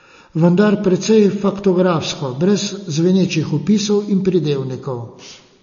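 MP3 compression damage runs through the whole of this speech clip, likely from a low-bitrate MP3 encode, the sound pointing to around 32 kbps. Starved of bits, the encoder removed everything above 7 kHz and dropped weak frequency lines frame by frame, giving a plainly audible watery swirl.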